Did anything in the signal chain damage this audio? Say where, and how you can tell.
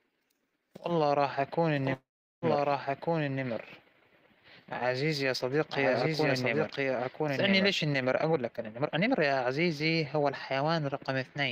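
Yes. From 1.76 s to 7.95 s a doubled audio track is audible: a second, full-band copy at roughly the same level trails by about a second, with no room colour, and starts and stops abruptly. This likely comes from the capture or driver path recording the signal twice.

A call audio freeze runs from 1.93 s to 2.45 s. The last sound is stretched into a fading buzz for about 0.49 s, and roughly 0.38 s of that is silent. The audio then resumes where it stopped, so nothing is lost but the delay grows. The likely cause is held-up network packets draining the jitter buffer.

A jitter buffer speed-up runs from 8.33 s to 10.63 s. The speech plays at about 121% speed with unchanged pitch and sounds hurried. The receiver trimmed many short pitch-period chunks, around half a second in total, to work off the excess buffered delay.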